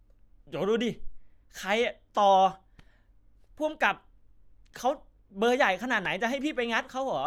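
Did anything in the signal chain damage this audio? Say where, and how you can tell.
No, nothing along the chain audibly damaged this speech.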